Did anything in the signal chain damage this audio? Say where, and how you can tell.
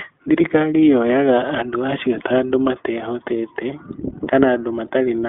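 Yes. From start to finish the speech sounds plainly rough and slightly synthetic, and the band is boxed in to roughly 250 Hz to 3.4 kHz, with nothing above it. The damage happens at the codec stage, and the culprit is the iLBC codec. It codes each block of excitation on its own, without drawing on the previous one. That graininess fits 20 ms frames, which would point to the 15.2 kbps mode, and the narrowband limit removes the upper harmonics and sibilance.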